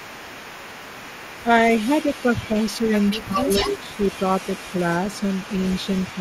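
From the start to about 6.2 s there is an echo leak, likely from a loudspeaker-side echo canceller that fails to remove everything its microphone picks up and returns the remainder down the line. The result is a faint delayed copy of the speech trailing the original by 185 ms, sitting roughly 20 dB below it.

Speech suppressed in double talk is heard at 1.43 to 1.5 s, 2.48 to 2.56 s, 2.79 to 2.88 s and 3.18 to 3.84 s. When both ends sound at once, the canceller likely cannot tell the near talker from its own echo and pulls everything down. The speech dips by around 10 dB in the first and last spots and only a few dB in the middle two, with the longest lasting about half a second.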